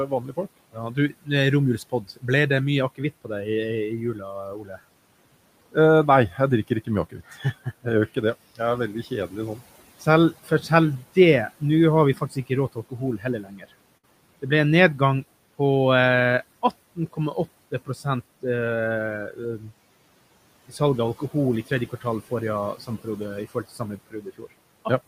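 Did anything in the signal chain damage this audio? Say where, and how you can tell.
Yes. Soft consonants and word endings sound swallowed and faint across 0.07–4.78 s, 5.72–15.6 s, 16.96–19.65 s and 20.69–25.08 s, dipping by up to about 18 dB. This is speech cut by the noise suppressor during call processing, which mistakes quiet speech for the room noise about 21 dB below and pulls both down.

At 13.97–14.05 s the sound freezes into a held, fading tail for about 57 ms, then jumps ahead with roughly 60 ms missing. That is a burst of packet loss on the network: the receiver stretched the last audio and faded it while packets never arrived.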